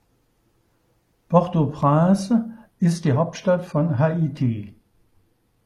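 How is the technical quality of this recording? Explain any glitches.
The first stretch of this speech is clean, but from 2.71 s to the end there's an adaptive stream at a lower bitrate. The connection dipped and the player switched to a leaner version with no gap, so the quality changes abruptly and codec artefacts rise. That fits a drop from AAC at around 96 kbit/s to HE-AAC at around 24 kbit/s.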